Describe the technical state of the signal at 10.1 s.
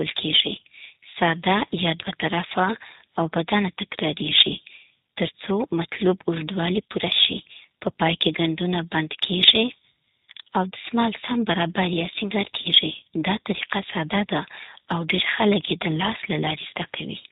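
G.729 codec coding is present at 10.1 s, as it is across the whole recording. The speech is rebuilt from a short-term vocal tract filter, a pitch predictor and a sparse set of pulses every 10 ms, at a very low rate that fits 8 kbit/s. Nothing above 4 kHz survives, so the voice sounds narrow and muffled, and the coding damage is plainly audible as a rough, slightly synthetic buzz.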